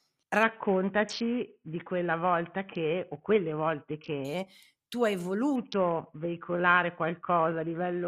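A congested Bluetooth link twice forced an SBC bit pool drop in this speech clip, from 0.43 to 4.25 s and again from 5.56 s to the end. The encoder's bit budget appears to fall from a normal setting near 31 to around 5, which fits roughly 50 kbps. Starved of bits, the upper sub-bands get little or nothing and the rest are coarsely quantised, so the treble goes dull and a gritty noise sits on the speech.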